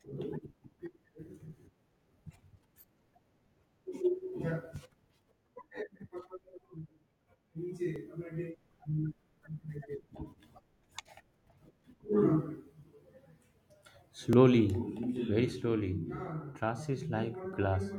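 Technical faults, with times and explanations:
1.57 to 17.53 s, clock drift buffer slips: a click pops through the speech about every 3.19 s, around seven in all. Likely two devices on separate clocks a few hundred ppm apart, so a block of roughly 70 samples gets dropped or repeated each time.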